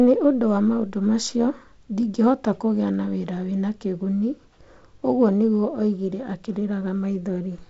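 No technical fault can be heard in this speech; it carries the character of G.722 wideband telephone coding, with nothing above about 7.7 kHz, a light hiss in the upper band, and a slightly grainier lower band that points to the codec's 48 kbit/s mode.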